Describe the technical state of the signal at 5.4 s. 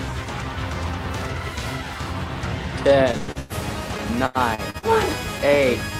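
At 5.4 s there is a short concealed packet loss, spanning 5.38 to 5.42 s. About 40 ms never arrived in time. The receiver invented only 9 ms to cover it, then jumped ahead roughly 30 ms. A brief smear or wobble results.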